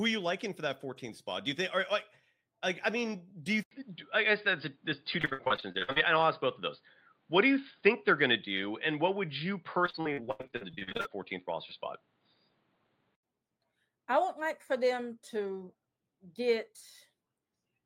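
At 3.63 s, right after "I mean do you", the speech drops out for about 80 ms and returns duller and boxier. Nothing is present above 4.8 kHz, the level shifts by about 5 dB, and a new noise floor sits about 45 dB below the signal. This is most likely an input switched to a poorer device, such as a second microphone or a headset call profile. The narrower, flatter sound lasts until 13.23 s.

Within that stretch come two bursts of repeated packet loss, heard as robotic sound. From 5.21 to 5.98 s there are about a dozen short holes, the longest 56 ms, and roughly 42% of the span is filled by stretching the preceding sound. From 9.86 to 11.07 s there are 19 dropouts, the longest 83 ms, and nearly half the span is concealed. Both bursts sound choppy, with fragments of speech missing.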